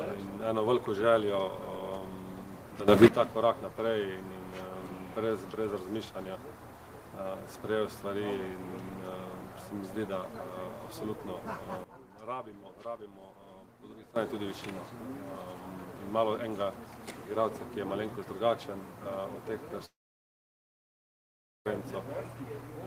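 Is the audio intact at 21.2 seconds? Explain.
No. A likely long network dropout spans 19.85 to 21.67 s: the last sound is stretched into a fading buzz, then silence, and 1.8 s never plays.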